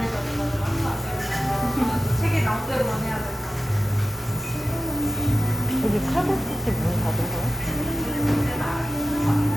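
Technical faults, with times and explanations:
No technical faults can be heard: the signal stays steady and intact from its first moment to its last, with no interruption or disturbance in its path.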